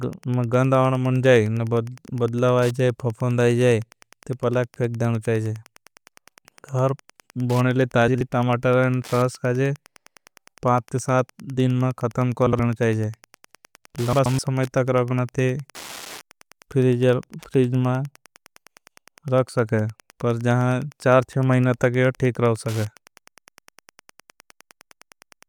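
Wi-Fi interference runs under the entire speech clip. A nearby Wi-Fi radio's transmissions are being rectified by the audio circuit, so its beacon, repeating every 102.4 ms, appears as a steady ticking just under ten times a second, with rougher rasps where data bursts fall between beacons. It sits low, around 30 dB below the speech, as a regular mechanical pulse.

Frames out of order first occurs from 8.08 to 8.21 s, just before "टोमाटर न शास खाजे". Two adjacent 64 ms blocks were decoded in swapped order, which suggests two frames per block, so the stretch plays with its halves exchanged. It comes out as a brief garbled flutter, and no time is lost. The same swap of two 64 ms blocks recurs from 12.47 to 12.60 s. A longer one follows from 14.13 to 14.39 s, just before "तक रखना ते", with 128 ms blocks that point to four frames each.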